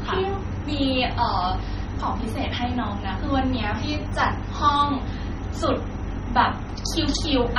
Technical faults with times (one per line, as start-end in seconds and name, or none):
0.00-7.59 MP3 compression